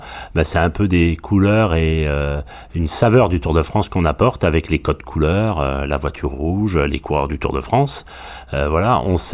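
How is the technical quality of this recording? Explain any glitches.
No glitches turn up anywhere in the recording. There is nothing in it that calls for an explanation.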